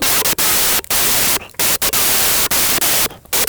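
Speech clip with a wrong sample width throughout: 16-bit samples are being read as packed 24-bit, so mismatched bytes bury the voice in loud noise and it runs 1.5 times fast and high.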